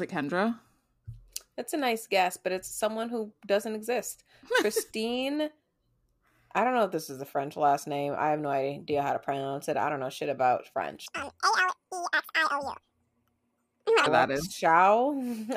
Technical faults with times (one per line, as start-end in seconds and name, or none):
11.06-14.06 audio read two samples at a time (double speed)